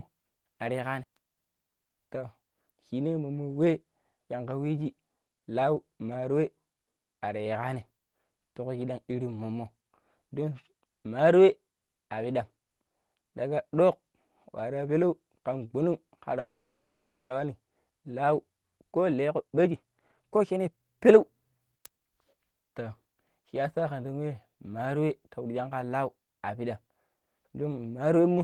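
This one's a speech recording that's come through a call, and you can hear the Opus-style coding with the top end cut off around 12 kHz. At 16.39 s there's a call audio freeze lasting until 17.33 s. The last bit of sound smears on as a short fading tail, then it goes silent for about 0.8 s before picking up again at "wani lau." The likely cause is packets getting held up in transit, which drained the jitter buffer. When they finally arrived, playback carried on from where it stopped, so roughly 0.9 s of gap got inserted while nothing was actually lost. Right after "wani lau," from 18.44 s to 22.34 s, you get the jitter buffer speed-up. The receiver is sitting on too much backlog, so it keeps snipping out pitch-period-sized chunks to catch up. That makes the speech run about 23% fast at unchanged pitch, and the talking sounds noticeably rushed until around a second of delay has been trimmed away.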